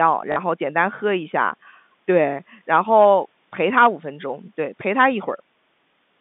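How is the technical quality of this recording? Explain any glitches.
There is one glitch, a short robotic stutter from 0.32 to 0.36 s, heard through the narrow telephone band of G.711 coding that cuts everything above about 3.6 kHz.

That stutter is packet loss with the last packet repeated. About 40 ms of audio went missing, which fits two lost 20 ms packets, and the receiver replayed the final good packet to fill the gap. The repeat seldom lines up with the pitch, and the run buzzes briefly. Unlike a dropout, there is no silence, only repeated sound.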